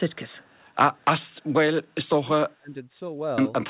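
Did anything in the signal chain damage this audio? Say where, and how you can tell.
Yes, three kinds of damage, all in the call processing and playback rather than the G.711 A-law path, whose 4 kHz ceiling is simply that codec's normal bandwidth.

Echo leak, call processing: from 0.12 to 0.64 s and again from 1.44 to 1.53 s there's a faint delayed copy of the speech trailing it by about 167 ms, roughly 40 dB down. That's likely a far-end echo canceller letting some of its loudspeaker pickup through and sending it back.

Speech suppressed in double talk, call processing: between 2.08 and 2.75 s the speech dips and drops out in patches, as much as about 30 dB at the worst point, adding up to around half a second. It's likely an echo canceller that couldn't separate the talker from the echo and turned both down.

Clipped start after a pause, playback: after a 0.71 s silence, the sound at 3.19 s starts abruptly, with about 190 ms missing before it comes back in at 3.38 s. 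The output device went to sleep in the pause and swallowed the onset while it woke up.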